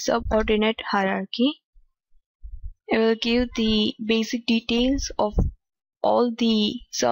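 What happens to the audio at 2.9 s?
Nothing goes wrong at 2.9 s; the audio carries on intact through that moment, with no dropout, click, distortion or other fault to be heard.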